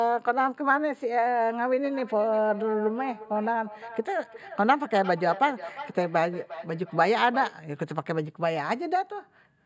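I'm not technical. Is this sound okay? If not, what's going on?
No, not quite. From about 1.84 to 7.6 seconds there's a feedback echo between two devices. Two devices in the same room are on one call, so one plays back what the other's microphone sent, and that microphone hears it again. Each bit of speech comes back a little under half a second later, quieter than the original, thinner and a bit ringy, and it comes back because neither device's echo cancelling catches the other's sound.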